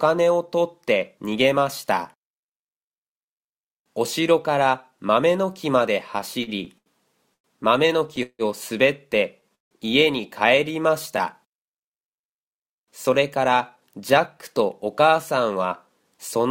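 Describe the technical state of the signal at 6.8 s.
Late-arriving packets repeatedly emptied the jitter buffer from 6.43 to 7.47 s, causing repeated stalls (stutter): four gaps, the longest 102 ms, filled by stretching the last sound, so nothing is lost but the audio drags.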